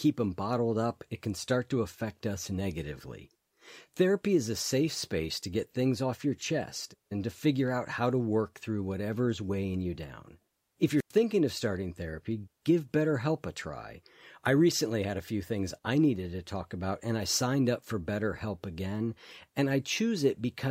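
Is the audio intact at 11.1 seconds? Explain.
No. A wireless microphone squelch dropout runs from 10.96 to 11.13 s: the fading radio signal triggers squelch, giving hiss, then a 100 ms mute before the speech returns.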